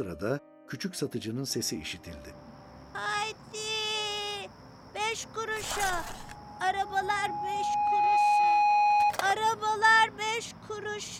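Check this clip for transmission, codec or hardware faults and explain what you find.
One fault stands out: loudspeaker feedback squeal from 6.22 to 9.15 s. A microphone is hearing its own loudspeaker, and the loop gain at 831 Hz exceeds one, so that single tone swells over about two seconds to roughly 10 dB above the sound. Unlike a steady interference whistle, it grows on its own before cutting off.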